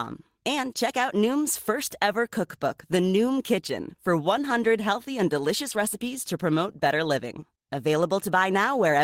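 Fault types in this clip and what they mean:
No fault types can be heard in this clip.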